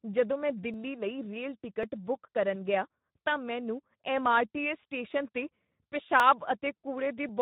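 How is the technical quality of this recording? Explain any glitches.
The technical quality is poor. Two problems are audible: coarse speech coding throughout, and a regular clicking pattern.

The Speex codec damage runs the whole length of the clip. At about 11 kbps this CELP codec has few bits to model the excitation signal. The speech sounds noisy and hoarse, with a rough edge. Nothing is present above 3.8 kHz. The speech therefore also sounds narrow and muffled, like older VoIP or game chat.

Clock drift buffer slips start at 0.74 s, right after "ਜਦੋਂ ਮੈਂ". They recur every 1.09 s until 7.29 s, about seven times. Each slip is a short click or pop in the speech. The likely cause is two devices running on separate clocks that disagree by several hundred parts per million. The buffer between them slowly fills or drains. Then a few dozen samples are dropped or repeated at once.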